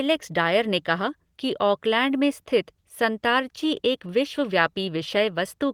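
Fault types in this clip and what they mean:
No technical fault can be heard in this speech clip; it carries the light, full-band character of Opus voice compression in its hybrid mode, consistent with a bitrate of around 24 kbps, with no dropouts, clipping or other defects in the signal.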